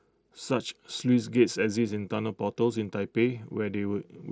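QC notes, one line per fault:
The speech comes through the Bluetooth mSBC headset codec path with its wideband response reaching up to about 8 kHz, and nothing in the signal calls for a fault entry.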